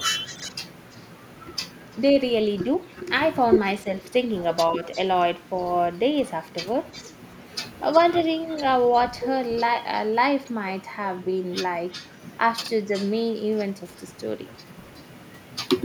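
Right from 0.2 s to 2.02 s there's a faint trailing copy of the speech, about 20 dB under the main signal and lagging by roughly 334 ms. That's an echo leak, most likely from the far end playing the call over a loudspeaker while its echo canceller let some of the mic pickup through and sent it back. It sits quietly behind the talker, a ghost just over a third of a second late.

Inside that stretch, between 0.36 s and 0.42 s, there's a brief garbled jumble. That's chunks out of order: a 20 ms block of audio landed two blocks late and plays after material that should have followed it. Nothing's missing, but the reshuffle leaves three hard joins.

From 3.83 s to 4.84 s the talker dips in patches, around 150 ms in total, dropping by about 10 dB at the worst point. That's speech suppressed in double talk. With both sides talking at once, the canceller likely couldn't separate the near talker from the loudspeaker echo and pulled both down. 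The echo leak shows up again over the same moment, from 4.0 s to 5.0 s at about 343 ms delay and roughly 20 dB down.

The echo leak comes back twice more. From 6.92 s to 9.01 s it's quieter, about 25 dB down at 352 ms. From 11.9 s to 15.09 s it's around 20 dB down at 367 ms, the delay creeping up a little each time. Inside that last stretch, from 12.62 s to 12.68 s, chunks out of order strikes again, with the same 20 ms block arriving two late and the same scramble.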